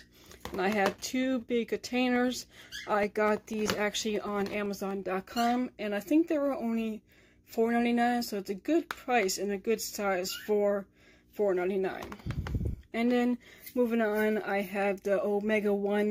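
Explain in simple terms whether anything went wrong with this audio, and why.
Yes, something went wrong. From 2.16 to 5.03 s there's a steady tick every 0.125 s, around twenty in all. These are periodic USB or driver dropouts: something keeps stalling the audio path, and about a millisecond of sound drops to silence each time.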